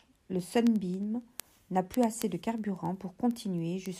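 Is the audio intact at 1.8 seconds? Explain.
No. At 1.8 s the speech sits inside word clock ticks running from 0.12 to 3.95 s: an unlocked receiver slips one sample roughly ten times per second, giving sharp, uneven ticks.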